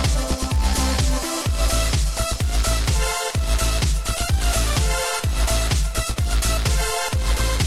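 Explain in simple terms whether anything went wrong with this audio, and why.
A low buzz runs through the whole clip, at about 43 ticks per second. This is a filter restarted on every block. The filter forgets its state and restarts from silence each time, making a tiny click. That rate fits blocks of 1024 samples.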